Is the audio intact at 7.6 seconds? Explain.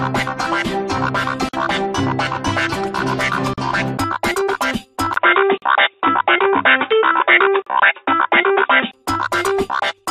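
No. From 5.14 to 8.93 s the system likely switched its input to a poorer device, whose narrower band cuts everything above 3.8 kHz. The sound turns dull and boxy, with a 20 ms silence at the switch, a modest level shift and a faint new noise floor.

Inside that span, at 7.62 to 7.66 s, there is a gap at a join of encoded pieces. Separately encoded segments were butted together untrimmed, leaving the encoder's start-up delay and padded last frame in place. A 43.4 ms hole with smeared edges breaks the continuous sound, which then resumes where it stopped. These joins recur every 2.0 s.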